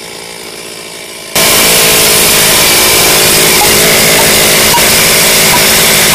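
From 1.36 s to the end, the sound turns into very loud, harsh distortion with no quiet passages. The likely cause is signed and unsigned samples mixed up in 16-bit data, so every zero crossing jumps across the full range.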